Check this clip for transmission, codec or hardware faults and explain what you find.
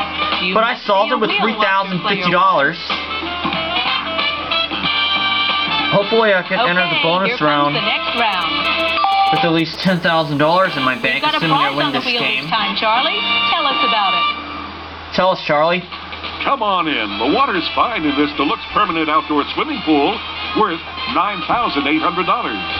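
Two interference faults from a nearby 2G handset appear back to back, with no transmission or codec problem in between.

From 8.18 to 9.84 s there are GSM signalling bursts. The phone is exchanging short groups of radio bursts with the network, and the audio circuitry rectifies each radio pulse into the baseband. The result is a galloping dit-dit-dit of short 217 Hz buzzes, sitting roughly 15 dB below the wanted sound.

From 9.87 to 12.49 s this becomes a continuous GSM phone buzz. The handset is now on a call and transmitting its 217 Hz burst train without a break, so the rectified pulses form a steady, hard, raspy tone rich in harmonics. It has no relation to the programme material and sits about 22 dB below it.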